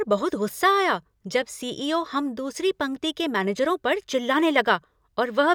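No technical faults are audible.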